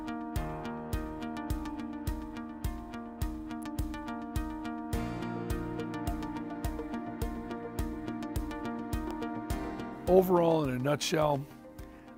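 At 3.62 s and again at 9.11 s a sharp snap sits on top of the sound, the second a little stronger, an electrical switching spike likely picked up from a nearby switch, motor or static discharge. Each shows as a narrow spike on the waveform and a thin vertical line spanning the spectrogram.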